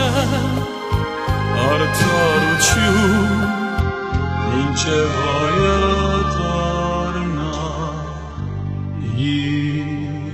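At 3.80 s the adaptive stream drops to a lower bitrate and stays there to the end, as the connection apparently slowed. The switch is abrupt but gapless: nothing remains above 8 kHz, and the thinner, synthetic-sounding top fits a very low-rate HE-AAC stream.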